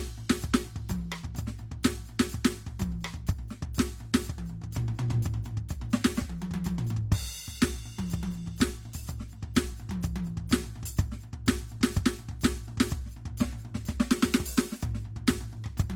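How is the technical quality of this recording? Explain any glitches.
The music carries a layered set of coding artefacts from start to finish, which points to transcoding between lossy codecs. The sound has the smeared, swirly texture of several low-bitrate encoders stacked together. This likely comes from a chain such as Vorbis at around 51 kbit/s, then Opus at around 32 kbit/s, then a final HE-AAC encode at around 48 kbit/s. Each stage spends bits re-encoding the previous stage's errors and adds its own. The top end stops at 20.3 kHz.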